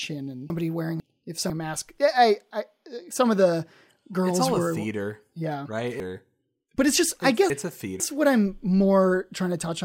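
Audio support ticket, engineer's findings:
Chunks out of order, twice in this speech clip.

0.5 to 1.5 s: two half-second blocks swapped, so a brief jumble. Looks like one 500 ms chunk landed late in the playout or write queue.

6.0 to 8.0 s: same deal, bigger. One 500 ms chunk shows up three chunks late, giving a two-second scramble. Nothing's missing, just reordered. Worth checking the buffer sequencing.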